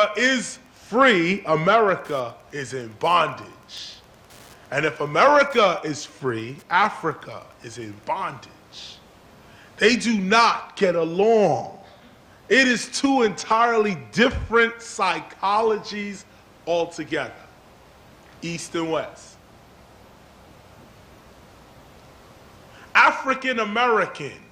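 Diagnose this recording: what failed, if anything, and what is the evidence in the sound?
Wi-Fi interference in the analogue wiring accounts for the fault. From 0.0 to 8.1 s a steady ticking runs under the sound at about ten ticks per second, spaced 102.4 ms apart, roughly 35 dB below the signal. That spacing matches a Wi-Fi beacon interval. A nearby radio's transmissions are picked up by unshielded cabling or an input stage, rectified by a junction in the analogue path, and summed into the signal as regular clicks.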